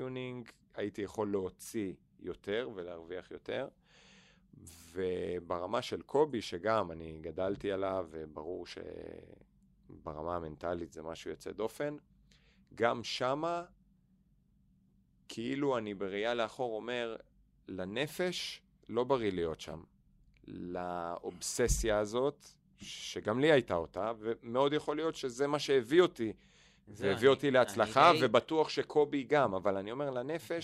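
Speech recording, with nothing technically wrong to point to.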